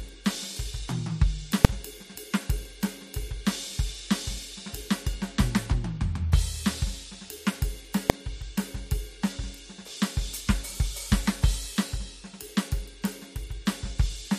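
At 1.65 s the music is hit by a sharp bang. It's invalid numbers at full scale: a calculation blew up, and about 2.9 ms of output got pinned at one extreme value, which fits a 128-sample block. At 8.10 s there's another bang from the same cause, and that much shorter block fits 32 samples.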